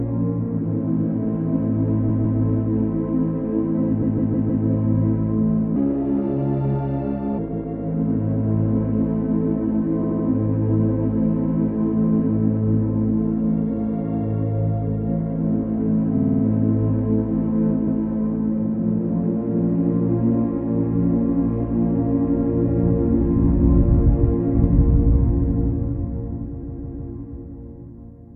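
A recording of everyday sounds with two kinds of fault. Repeated frames cause stutters at 2.08, 4.01, 7.52, 10.03, 16.17, 17.86 and 26.61 s. Each time a short block of compressed audio plays again, one to five extra times. Most blocks last 156.7 ms, fitting runs of compressed frames. Those at 10.03 and 16.17 s are shorter, 78.4 ms and 52.2 ms. Each repeat lengthens the clip. A section at the wrong speed runs from 5.76 to 7.38 s. It plays 1.27 times fast, so it sounds hurried and about four semitones high. The likely cause is playback against the wrong clock.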